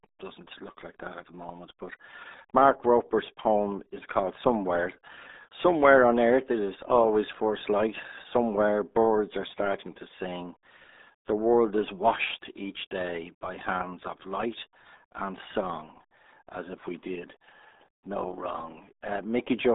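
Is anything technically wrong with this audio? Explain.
Yes. Throughout the speech, the audio carries the RealAudio 14.4 codec sound. Energy sits in a narrow band of roughly 250 Hz to 3.7 kHz, with nothing above 3.8 kHz, and the coding damage is heavy. The muffled, gargly texture fits a low-rate modem-era speech coder of about 8 kbit/s, which discards the upper spectrum and rebuilds the rest from a coarse model of the signal. Sibilants and consonant detail are lost, and vowels take on a watery, bubbling quality.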